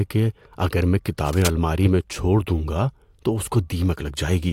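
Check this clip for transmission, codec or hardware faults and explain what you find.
One hardware fault is present. From 1.18 to 1.48 s, after "کہ اگر میں" and before "میں چھوڑ دوں گا", there is cable scratch noise: a dense, uneven rustling burst around 10 dB below the speech, likely from a worn connector whose contact resistance fluctuated as it moved.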